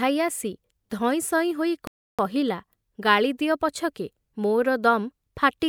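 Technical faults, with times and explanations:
1.87–2.19 s, playback stall: the speech cuts out mid-flow and there's about 310 ms of dead silence before it picks up again. That's most likely the player running dry of data or its thread getting blocked, so nothing reached the output until it recovered.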